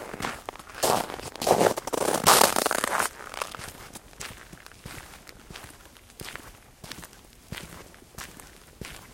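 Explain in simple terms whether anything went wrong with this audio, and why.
From 7.07 to 9.07 s, regular ticks come every half second, about five in all. These are periodic USB or driver dropouts: something briefly stalled the audio, leaving roughly a millisecond of silence each time.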